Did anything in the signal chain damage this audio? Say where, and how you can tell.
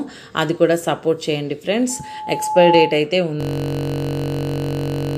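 Yes. From 1.89 to 3.05 s a loudspeaker feedback squeal appears in the acoustic path between microphone and speaker. A single 859 Hz tone swells over about 0.7 s to roughly 5 dB above the programme. That gradual build at one pitch separates it from a buffer fault.

From 3.41 s to the end, a system hang loop occurs at the driver or buffer stage. The same 21.33 ms fragment repeats exactly, producing a steady 46.9 Hz buzz, which fits a 1024-sample buffer. Unlike feedback, it starts abruptly and has no pitch growth.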